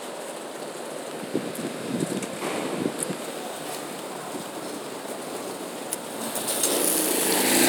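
From 3.23 s to the end, crude rate conversion sets in. Samples are simply repeated, with no filtering, which fits a change from 44.1 kHz to 48 kHz. The resulting error sits roughly 10 dB below the sound. It adds a gritty, inharmonic fizz.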